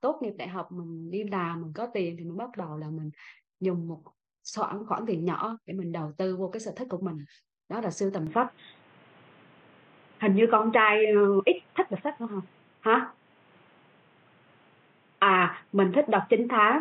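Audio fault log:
8.27–16.81 s, input switched to a poorer device: from 8.27 s to the end the speech suddenly goes dull and boxy, with nothing above 3.8 kHz, so the sibilance and air just vanish. There's no gap at the changeover. The level shifts by around 5 dB, and a new background noise sits roughly 35 dB under the speech. That's likely the recording flipping to a different mic or a headset call profile with its own narrow band, gain and noise floor.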